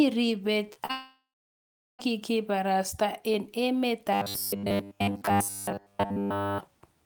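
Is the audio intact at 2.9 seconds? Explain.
Yes, at 2.9 seconds the speech comes through intact, with no dropout, click, distortion or other disruption to be heard at that point.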